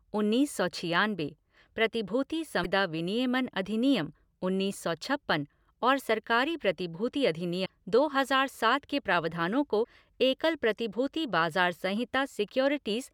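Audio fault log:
2.63–2.66 s, 7.65–7.69 s (between "छप्पन और सरकारी प्रतिभूति" and "दो हज़ार सात के") and 9.83–9.87 s (between "हज़ार सात के प्रावधानों" and "एकल प्रतिभूति"), broken MP3 bit reservoir: frames were likely dropped, so the next frame reads its borrowed bits from the wrong data. The speech jumps ahead through a brief garbled break of 30 to 50 ms, on the scale of one to two 24 ms frames.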